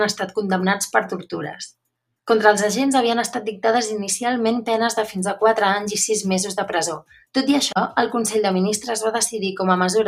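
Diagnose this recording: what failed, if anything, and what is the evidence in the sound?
Nothing stood out on listening that would point to a failure at any stage of the chain.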